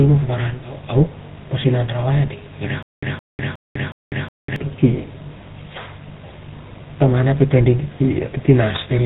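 From 2.83 to 4.56 s, after "a ding irak", a stutter with silent gaps: a 166 ms fragment repeats four times, separated by 199 ms of digital silence, likely a stalled stream retrying.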